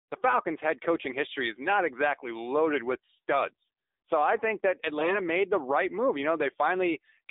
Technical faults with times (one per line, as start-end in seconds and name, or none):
0.00-7.30 AMR narrowband mobile codec
4.98-5.17 AMR bit errors